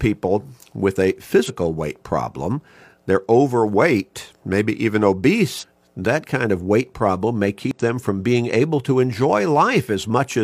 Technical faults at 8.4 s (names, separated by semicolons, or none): none